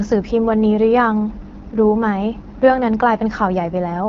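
From start to finish the speech carries AMR wideband (HD Voice) codec damage, plainly audible. A bitrate near 8.85 kbit/s leaves it rough and raspy, with nothing above 6.8 kHz.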